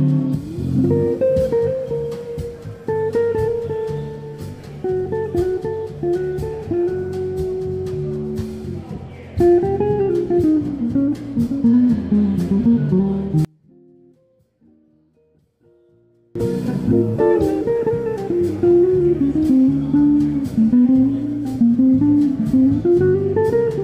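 From 13.45 s to 16.35 s the sound drops by about 34 dB and turns faint and ghostly, with nearly all of it gone. That's likely one channel inverted: with one side's polarity flipped, whatever the channels share cancels when they're summed to mono.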